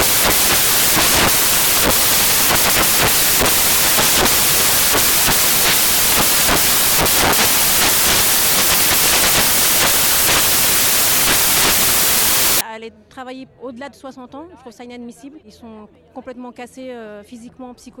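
From the start to 12.61 s the audio is buried under loud, harsh broadband noise, close to white on loud sounds. These are samples built from the wrong bytes: each value was assembled misaligned or byte-swapped, so rapidly changing low-order bits dominate every sample.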